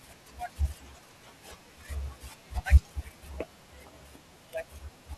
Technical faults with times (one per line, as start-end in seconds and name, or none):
0.74 dropped buffer (overrun)
2.50 dropped buffer (overrun)